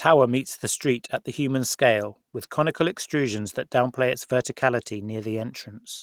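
Listening to this speech recording, nothing technical stood out at any point.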